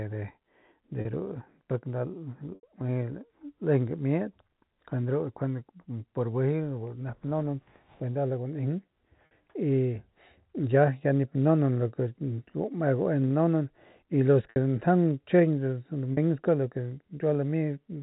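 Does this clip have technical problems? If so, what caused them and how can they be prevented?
Yes. Packet loss with pitch repetition occurs at 1.01 s (40 ms), 2.55 s (80 ms), 9.26 s (50 ms), 14.5 s (60 ms) and 16.13 s (40 ms). At each gap the receiver replays the last pitch cycle to cover the missing packets, giving a briefly held, buzzy tone. At 2.55 s this replay dies away before the speech resumes. The gap lengths point to 10 ms packets. The G.711 telephone band is audible underneath. To prevent these dropouts, carry the call over a less congested network with a larger jitter buffer or with forward error correction.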